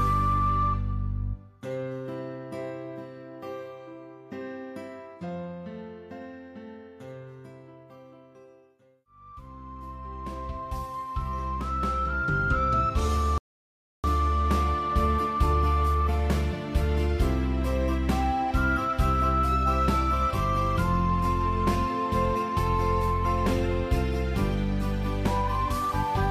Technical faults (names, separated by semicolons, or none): rebuffering stall